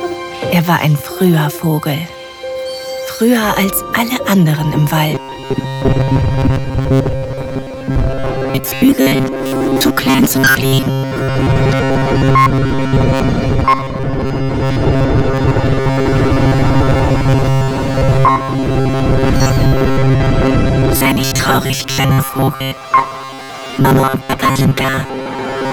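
From about 5.15 s right through to the end at 25.72 s, the sound takes on a robotic, metallic buzz pitched at 134 Hz. This is robotic sound from repeated short buffers, most likely from new audio arriving too slowly, so the playback keeps looping a short slice of roughly 7.5 ms instead. Those loops cover most of that stretch, maybe 70 percent, and the fixed repeat rate stamps that rigid drone over everything while only the broad shape of the original sound comes through.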